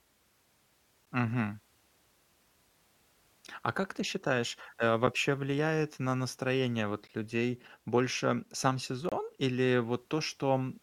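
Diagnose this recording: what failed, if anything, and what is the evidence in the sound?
Gaps between stream segments, at playback: hard-edged silences at 1.05 s, 5.07 s, 7.08 s and 9.09 to 9.12 s, 6 to 27 ms long, on a 2-second segment grid. Timestamps fail to abut, so silence fills each hole. Waveform: flat silent runs. Spectrogram: thin empty vertical stripes.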